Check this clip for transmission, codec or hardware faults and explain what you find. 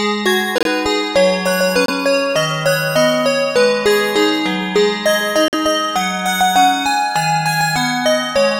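Three corrupt frame muted dropouts, at 0.58–0.67 s, 1.86–1.90 s and 5.48–5.54 s. Damaged compressed frames were rejected and replaced with silence, giving abrupt holes with no timing shift.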